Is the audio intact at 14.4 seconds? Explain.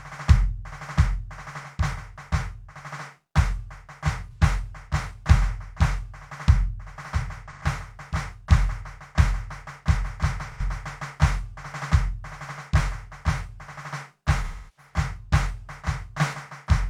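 No. From 14.43 to 14.92 s the music shows AAC frame loss with concealment: roughly 340 ms of frames, which points to about eight, went missing, and the decoder rebuilt them from the last good spectrum. It sounds like a smeared, noisy or phasey patch. A spectrogram shows a blurred, transient-free smear there.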